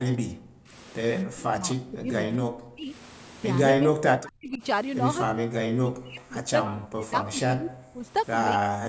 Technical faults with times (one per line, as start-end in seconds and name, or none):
0.00-0.73 speech suppressed in double talk
1.24-2.92 speech suppressed in double talk
3.77-4.62 speech suppressed in double talk
5.28-5.45 speech suppressed in double talk
5.81-8.05 speech suppressed in double talk
8.57-8.89 speech suppressed in double talk